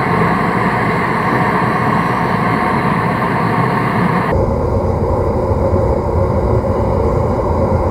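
Stereo read as mono from 4.32 s to the end: interleaved left and right samples play as one channel, so the sound runs at half speed, an octave low, with a faint mirrored image high up.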